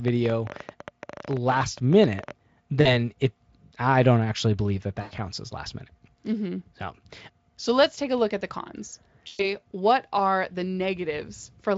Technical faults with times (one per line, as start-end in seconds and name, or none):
0.08-2.32 train of clicks
2.81-2.89 VoIP packet loss concealed by the speech codec
5.01-5.13 VoIP packet loss concealed by the speech codec
9.27-9.51 VoIP packet loss concealed by the speech codec